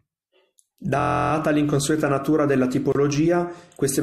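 From 1.00 to 1.32 s the speech locks into a system hang loop. The machine or its audio driver stalled while the output hardware kept replaying the same ring buffer, so one slice about 23 ms long repeats exactly, 14 times over. At that size, which fits a 1024-sample buffer, the repetition fuses into a steady buzz at about 43 Hz rather than a stutter. Essentially nothing is lost, and the speech resumes on "l'inconsueta natura della".

At 2.92 s, right after "l'inconsueta natura della", a 29 ms silence opens, lasting to 2.95 s. This is a gap at a join of encoded pieces. Two separately encoded segments were spliced without trimming, so the encoder's start-up delay and the padding of the previous segment's final frame both remain in the stream as dead air. The codec smears its edges, so the truly silent part is shorter, and the speech then continues from exactly where it broke off.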